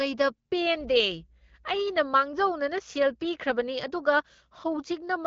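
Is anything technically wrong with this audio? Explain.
No, nothing here is technically wrong: the speech is carried by the AMR wideband (HD Voice) codec at 12.65 kbit/s, with nothing above 7.5 kHz, which is the normal behaviour of that codec.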